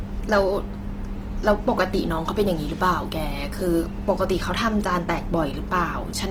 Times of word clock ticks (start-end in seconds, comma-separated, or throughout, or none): none